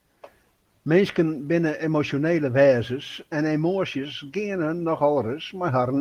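Nothing in this speech stood out as a technical fault on listening.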